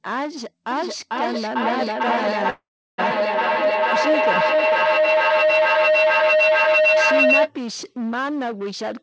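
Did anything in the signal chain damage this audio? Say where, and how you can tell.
Yes. Feedback howl runs from 0.71 to 7.52 s. A room loop between two devices builds a tone near 700 Hz, about 8 dB above speech, pulsing every 400 ms or so.

Call audio freeze at 2.50 to 3.00 s. The sound stalls, falls silent briefly, then resumes with nothing lost. Likely a network delay draining the jitter buffer.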